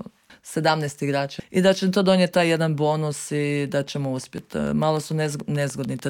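A train of clicks runs from 4.24 to 6.00 s: about fifteen evenly spaced pops at 6.84 per second, peaking roughly 5 dB above the audio, likely from nearby interference.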